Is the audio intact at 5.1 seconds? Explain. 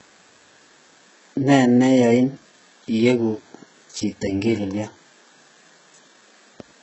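No. At 5.1 s, as throughout, the speech shows heavy damage from likely HE-AAC compression at a bitrate of about 8 kbps. Treble is synthesised by copying lower bands upward, so sibilants turn gritty and metallic, with nothing above 8 kHz. A plain low-pass would sound dull rather than falsely bright.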